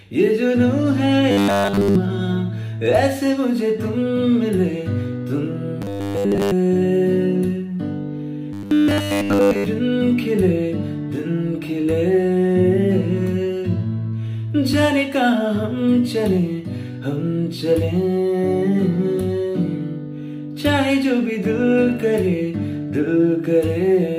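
From 1.31 to 1.96 s, 5.82 to 6.52 s and 8.53 to 9.66 s, the sound collapses into a rigid, metallic 100 Hz buzz: robotic sound from repeated short buffers. The likely cause is audio arriving too seldom, so a 10 ms slice is looped in place of fresh signal for essentially the whole of each stretch. On a spectrogram each span shows an evenly spaced comb of harmonics at multiples of 100 Hz, and the waveform repeats every 10 ms.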